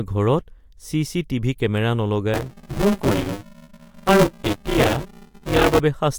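Speech, with a robotic 200 Hz rattle from 2.34 s to 5.8 s, just after "টিভি কেমেৰা". This is buffer tearing: writer and playback hardware cross mid-period, splicing earlier audio into each buffer.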